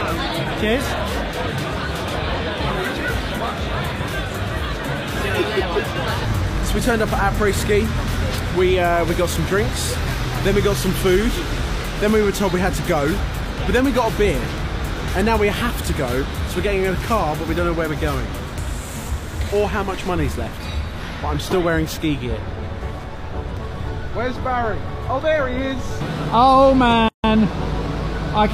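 Right near the end, from about 27.08 to 27.24 s, there's a gap at a join of encoded pieces: the sound just drops out for roughly 155 ms and then picks up exactly where it left off. That's what you get when separately encoded chunks are butted together untrimmed, so one run's padded final frame and the next run's start-up delay both survive as dead air. The edges are smeared by the codec.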